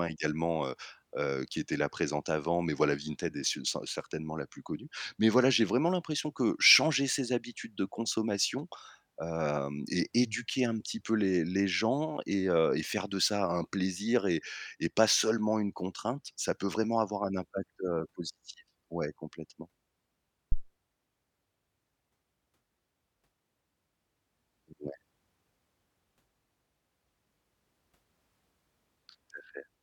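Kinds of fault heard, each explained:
Phantom power thump: a supply voltage switched on or off on a live microphone input sends a sudden DC step through the coupling capacitors, and the input hears it as a single low, dull knock. At 20.52 s the speech is hit by a deep thump peaking at about -15 dBFS, decaying within roughly 26 ms and gone by 20.64 s. The waveform shows one large, slow, lopsided excursion, and the spectrogram shows a brief bright patch of energy confined to the lowest frequencies.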